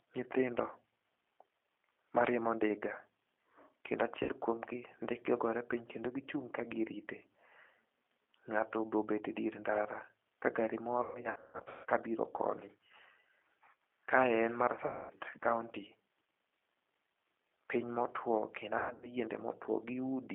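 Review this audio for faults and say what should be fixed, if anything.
The whole clip carries G.729 codec damage. The speech is confined to roughly 300 Hz to 3.5 kHz and sounds rough and synthetic, which fits an 8 kbit/s G.729A stream. A plain telephone band filter would only muffle the sound. Here the codec rebuilds speech from a pitch predictor and a few pulses per frame, and that adds a buzzy graininess. To prevent it, use a wideband codec such as Opus.

VoIP packet loss concealed by the speech codec occurs four times:
4.23 to 4.32 s, just before "kuomgi ndike ogore piny", about 60 ms lost;
11.03 to 11.86 s, between "dier ndara ka gari" and "kabiro koni", 570 ms lost in bursts of up to 150 ms;
14.86 to 15.14 s, 240 ms lost;
18.78 to 19.10 s, 210 ms lost in bursts of up to 120 ms.

At each gap the decoder stretches the last pitch and filter into a fading buzzy tone or coloured noise. 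This is what separates it from a dropout, which would be silence or a click. The speech then stays weak for a moment after the packets return. To prevent it, add jitter buffering and forward error correction.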